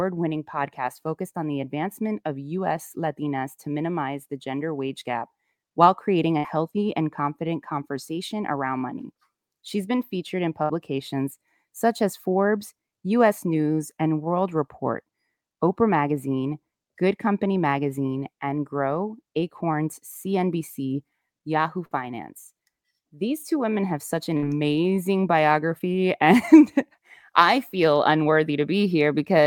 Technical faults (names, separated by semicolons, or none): burst of packet loss